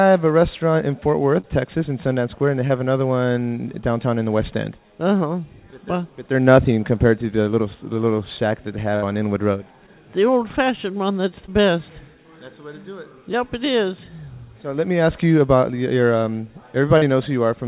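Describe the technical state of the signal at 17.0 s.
At 17.0 s there is a short concealed packet loss, running from 16.98 to 17.04 s. About 40 ms of the call's audio arrived too late for the decoder. The receiver covered the gap with 39 ms of synthesised fill, extending the preceding sound's pitch or shaping noise to match it, then crossfaded back into the real signal. It is heard as a brief smear or wobble. The G.711 A-law path keeps everything band-limited below 4 kHz.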